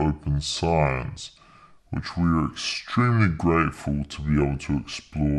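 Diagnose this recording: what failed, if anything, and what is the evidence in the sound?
The playback stage is running at the wrong sample rate: samples captured at one rate are being clocked out at a lower one with no conversion, which fits 48 kHz material played back at 32 kHz. The whole speech clip therefore runs at two-thirds speed, and every pitch drops by about 7 semitones, a ratio of 0.667. From start to finish the voice sounds low, thick and dragging, with speed and pitch shifted together rather than independently.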